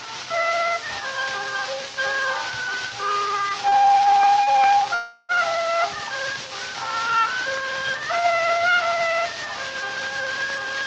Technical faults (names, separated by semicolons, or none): short stall from a late packet; call audio freeze